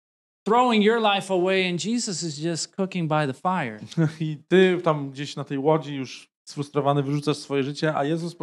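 A speech recording with no audible technical faults at any point in the signal.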